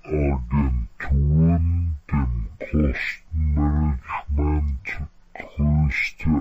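Throughout, speech suffers a stereo read as mono fault. Left and right samples run as one channel. It plays at half speed, an octave low.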